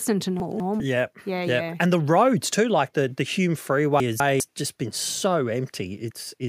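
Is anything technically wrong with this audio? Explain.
Yes. Chunks out of order occur at 0.4 to 0.8 s and 4.0 to 4.4 s: two 200 ms chunks swap places, producing a jumbled moment with three hard joins. Unlike a dropout, no audio goes missing.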